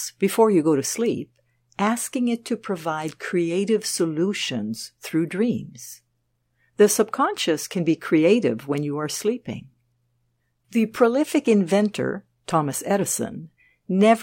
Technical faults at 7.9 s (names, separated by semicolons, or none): none